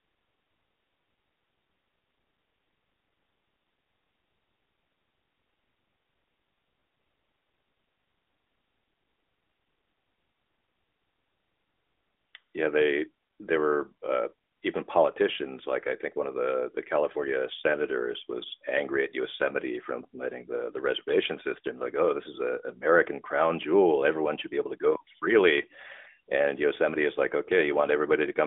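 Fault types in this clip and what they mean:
Nothing stood out on listening to this recording.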